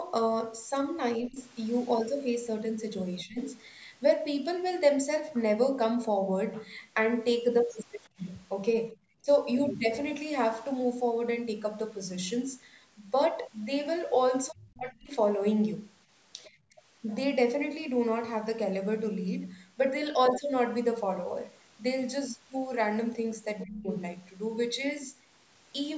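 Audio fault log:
1.28–3.38 s, 8.92–9.27 s, 14.5–16.81 s and 23.64–23.88 s, speech suppressed in double talk: the talker's speech dips in brief pieces inside each span, shallow at first (around 15 dB) and deepest near 14.5–16.81 s, at around 35 dB. The likely cause is the echo canceller mistaking overlapping far-end talk for echo and turning the talker down as well. Unlike a dropout or gap, the sound ducks and recovers rather than cutting to silence.
8.04–8.08 s, 16.44–16.49 s and 23.59–23.64 s, other side's voice leaking through: a second voice appears in short scraps under the talker. It is barely audible at 8.04 s, louder at 16.44 s and louder still at 23.59 s, where suppression of the talker follows right after. This is likely echo from the loudspeaker that the canceller did not fully remove. Unlike room reverberation, these scraps are a different voice, not a smeared copy of the talker.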